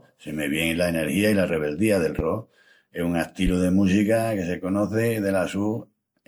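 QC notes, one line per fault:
throughout: generation loss. Swirly, smeared, hollow texture with blurred attacks, likely from about seven MP3 re-encodes near 96 kbit/s, each pass quantising afresh and compounding the noise.
2.19–2.23 s: loud pop. A single sharp pop about 10 dB above the speech, just after "i la rebeldía del", likely from a brief voltage step such as a plug or switch.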